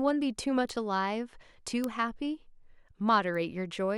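Sharp, isolated ticks at 0.69, 1.84 and 3.35 s, the loudest near 1.84 s at about -11 dBFS, are bit error spikes: single flipped bits briefly throwing one or two sample values off.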